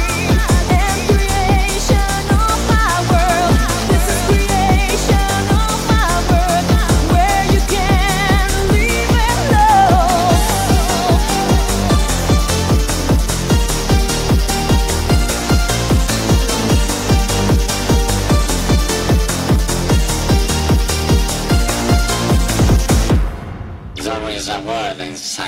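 No technical faults occur anywhere in this audio.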